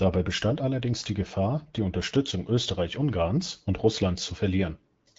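Nothing goes wrong anywhere in this bit of speech, which comes through the AMR wideband (HD Voice) codec at 12.65 kbit/s, a rate where that codec is working the way it should.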